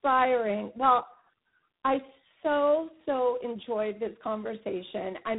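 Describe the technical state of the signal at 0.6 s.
At 0.6 s the speech shows tandem speech coding, and it lasts the whole clip. The sound was coded and decoded more than once on its way, with two low-rate speech coders in a row. The chain fits iLBC followed by G.726, with a G.711 link between. The second coder works on the first one's damaged output, so the errors stack. The result is rough, muffled and warbly speech with nothing above 3.9 kHz.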